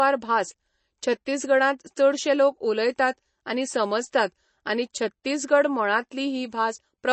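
Likely MP3 compression at a starved bitrate, around what 32 kbps would give, runs through the whole speech clip from start to finish. Short of bits, the encoder removes everything above about 8.3 kHz, so the treble stops dead and s sounds lose their top. It also drops the weaker frequency lines, which flicker in and out from frame to frame, leaving a plainly audible watery, swirling texture, metallic chirps on sibilants, and smeared consonant attacks.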